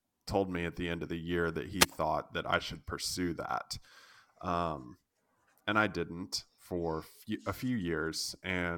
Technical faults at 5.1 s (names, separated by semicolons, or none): none